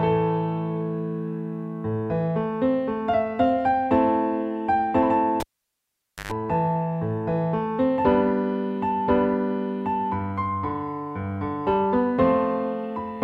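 At 5.40 s a pop cuts the sound to near silence for about 870 ms, broken by a 120 ms burst of 50 Hz mains buzz, and a second pop brings it back by 6.32 s: a cable pulled and plugged in while live, buzzing as only the tip made contact.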